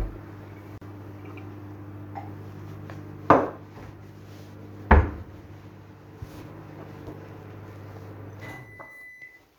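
At 0.78 s there's a gap at a join of encoded pieces: a gap of about 37 ms with smeared edges, from untrimmed encoder delay and padding, then the sound resumes.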